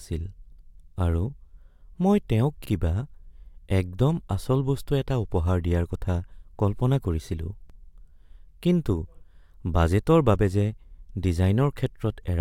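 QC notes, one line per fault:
2.65–2.70 s and 7.70–7.74 s, overlapping chunks: just after "মই তেওঁক", then 5.0 s later, each chunk restarts 44 ms early, replaying that slice as a brief stutter-click.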